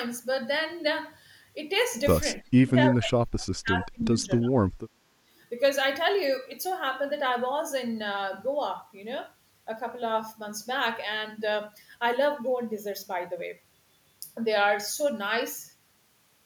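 From 2.41 to 4.65 s the speech dips and breaks up, falling by roughly 30 dB at its deepest, with about two seconds affected in total. This is speech suppressed in double talk, likely an echo canceller muting the near talker when both sides spoke at once.

At 3.99 to 4.05 s a brief, faint copy of the speech returns about 330 ms late, roughly 20 dB below the direct sound. This echo leak is likely residual loudspeaker pickup that the far-end echo canceller failed to remove.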